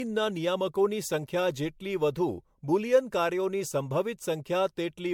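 Generation loss runs through the whole speech clip, with nothing above 19.7 kHz. The sound is swirly and hollow, with smeared consonant attacks, more degraded than a single pass at a bitrate that fits 96 kbit/s MP3 would leave. The likely cause is repeated MP3 decoding and re-encoding, around seven times. Each pass quantised on a shifted frame grid, so the noise and spectral gaps stacked up instead of staying fixed.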